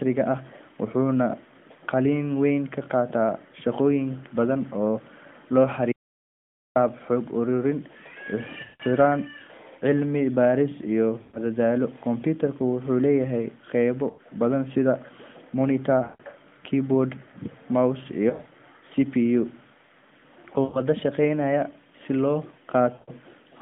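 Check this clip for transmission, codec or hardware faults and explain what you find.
Two kinds of fault turn up in this speech clip, which is carried over the AMR narrowband mobile codec with a band of roughly 150 Hz to 3.5 kHz.

Audio dropout to silence: From 5.92 to 6.76 s the sound stops dead for about 0.84 s. This comes right after "shaqooyin badan oo la". Speech returns at "xog ururin". The gap is silent, with no room tone. The input was likely lost while recording carried on, so that stretch is gone.

Lost AMR speech frames: These occur at 8.64, 11.22, 14.10, 16.04, 18.30, 20.64 and 22.94 s. Each lasts 80 to 160 ms. The one at 20.64 s comes just before "shaqeynaya si loo", and the one at 22.94 s comes just after those same words. At 18.30 s the losses are scattered over 160 ms in short runs. The decoder repeats the last good parameters while fading the gain. Speech smears, sags or warbles, then returns weak.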